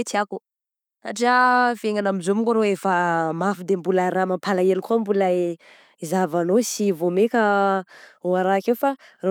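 No technical faults can be heard anywhere in the recording; the signal stays steady and intact throughout.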